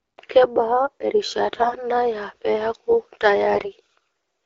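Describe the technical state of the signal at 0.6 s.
At 0.6 s the speech is intact, with no fault present, and it carries only the light coloration of the AMR wideband (HD Voice) codec at 12.65 kbit/s.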